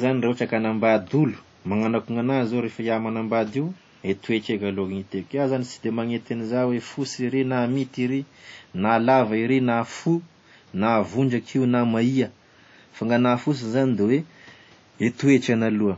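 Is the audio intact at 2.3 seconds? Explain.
No. At 2.3 seconds, as across the whole clip, the speech rings and smears heavily, with hiss that swells and fades alongside it. The likely cause is WMA compression at a low bitrate, consistent with 32 kbps: long transform blocks spread quantisation noise over tens of milliseconds and drop weaker spectral detail.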